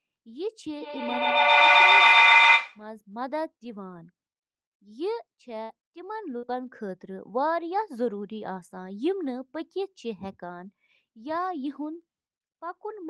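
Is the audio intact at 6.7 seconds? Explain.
No. From 5.63 to 6.78 s there is repeated packet loss (robotic sound): three dropouts, the longest 60 ms, each patched by extending the preceding sound, so the speech turns choppy with pieces missing. A spectrogram shows smeared, frozen harmonic bands, and the waveform shows abrupt, repetitive-looking chunks.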